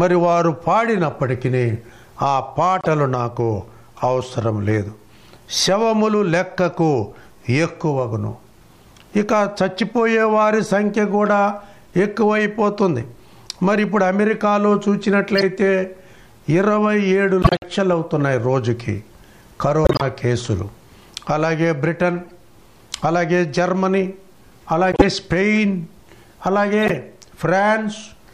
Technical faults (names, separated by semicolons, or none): corrupt frame decoded